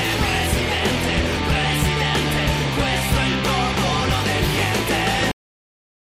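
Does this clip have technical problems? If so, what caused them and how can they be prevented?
Yes. A cut-off end occurs at 5.31 s, where the sound stops abruptly in the middle of an event and falls straight to digital silence, with no decay or tail, for the remaining 0.78 s. The final stretch of audio was never written out or played back. The last buffers were lost, probably because recording or rendering stopped before the pipeline flushed them. To prevent this, make sure the recorder or exporter drains and writes all pending buffers before closing the file.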